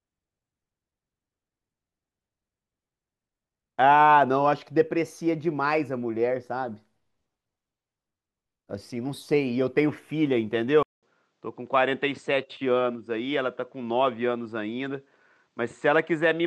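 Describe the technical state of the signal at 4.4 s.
At 4.4 s the speech signal is intact, with no audible dropout, clipping, noise burst or other technical fault at that moment.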